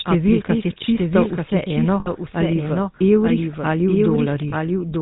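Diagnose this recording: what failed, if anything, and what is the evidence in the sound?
The stage is the capture or edit chain. A doubled audio track runs through the speech. A second, full-band copy trails the original by about a second and sits about 5 dB lower. It carries no decay and no room colour, so it is not an echo from a space. The cause is likely a second capture path running late, or an edit that stacked two out-of-step copies of the same recording.

The stage is the codec. The whole clip carries the GSM full-rate codec's sound. Nothing passes above 4 kHz, so the speech is dull and narrow. A buzzy, gravelly roughness sits on every voiced sound. That comes from the coder rebuilding the voice from a simple vocal-tract model, driven by a sparse, regular pulse train. The damage is plainly audible, and it fits the 13 kbps full-rate mode.

The stage is the network. There are lost GSM frames at 2.0 to 2.1 s, about 60 ms, and at 4.5 to 4.53 s, about 20 ms. 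At each point the sound freezes into a rough, metallic ring. The decoder had no good data, so it reused the last good frame's settings. The first gap points to about three consecutive frames lost, the second to one.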